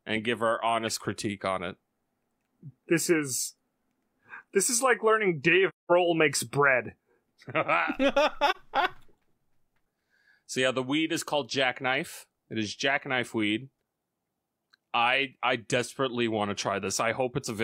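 The sound softly fades to silence after "this is like learning" from 5.69 to 5.91 s and returns before "makes bread", with a shorter dip from 8.50 to 8.57 s. Both are AAC frame loss with muting: the decoder zeroed the missing frames, about five and one, and overlapping windows smoothed the edges.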